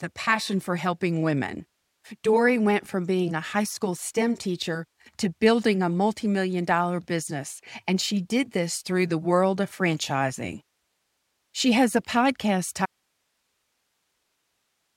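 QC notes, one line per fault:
12.86 s to end: audio dropout to a faint residue. The speech cuts out abruptly at 12.86 s and does not return before the clip ends. What remains is only low hiss, roughly 50 dB below the speech level. The change is instant, not a pause or a fade. The wanted signal was lost, but the path after the break stayed live. The likely cause is a source or connection failing upstream while the later stages kept passing their own noise.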